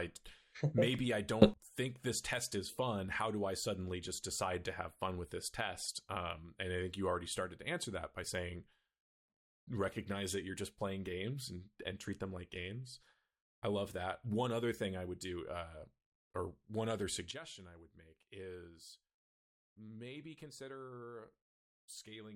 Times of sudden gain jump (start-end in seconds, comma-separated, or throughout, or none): 1.42-1.54, 17.31-22.35